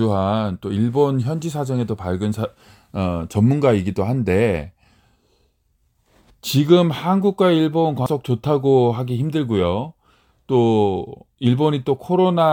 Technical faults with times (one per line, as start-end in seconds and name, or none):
8.06 damaged data in a compressed stream